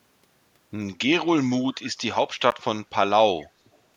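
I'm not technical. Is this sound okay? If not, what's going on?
No. At 1.72 to 1.84 s, and again at 3.40 to 3.45 s, there's a faint, slightly later repeat of the speech, trailing about 0.18 s behind it. The second is a little stronger. This is likely an echo leak: the other person's loudspeaker sound reached their microphone and wasn't fully removed.

At 2.51 s, the sound drops out for a split second, about 14 thousandths of a second, then carries on. That's likely a Bluetooth stall: radio interference briefly delayed the audio reaching the headphones, so playback paused until it caught up.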